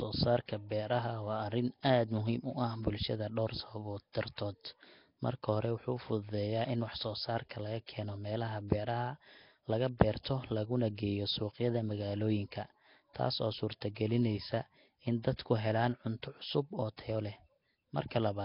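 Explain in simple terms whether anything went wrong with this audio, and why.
Throughout, the speech sounds rough and underwater, with a hissy haze around it and nothing above about 5.3 kHz. This is likely Nellymoser compression, an old Flash-era codec that packs audio into very few bits and fills the weakest parts with noise.

At 7.49 s, a brief hiss creeps in just before a sharp sound, softening its start. This is pre-echo: the codec spread its noise across a short block, about 17 ms of it landing ahead of the attack, so the quiet moment before the attack got filled too.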